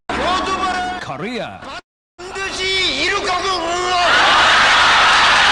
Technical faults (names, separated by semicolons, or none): call audio freeze